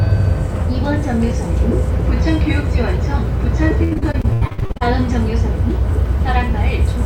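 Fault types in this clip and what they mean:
Repeated packet loss (robotic sound): from 3.83 to 4.82 s, a dozen dropouts are patched by repeating earlier sound, giving choppy audio, seen as stuttering, smeared spectrogram blocks.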